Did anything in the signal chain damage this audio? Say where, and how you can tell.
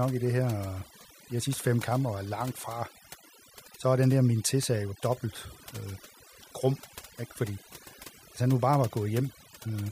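Yes: overdone noise removal in the processing stage, throughout. Aggressive per-band noise reduction leaves near-silent gaps with twinkling specks and a speckled, holey spectrogram.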